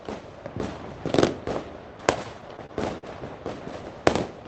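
From 2.23 to 3.05 s the sound hits repeated stalls (stutter): the jitter buffer ran dry seven times, and each gap, the longest about 49 ms, was filled by stretching the last sound. Unlike packet-loss dropouts, nothing is skipped; the audio drags and hiccups instead.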